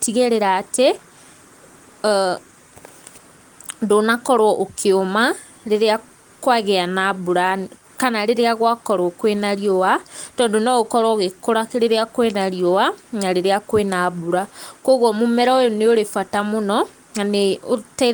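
Nothing in the speech points to a technical fault. What can be heard of the Opus voice compression path is only a light coding texture, which fits a fullband hybrid setting at around 24 kbps, with the top of the band kept.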